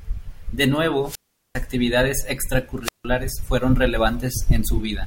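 Hiss swells, then the speech cuts to near silence for about 0.4 s from 1.03 s to 1.61 s, and again for about 0.16 s between 2.82 s and 3.05 s. That is wireless microphone squelch dropout: the radio signal faded and the receiver's squelch muted the output.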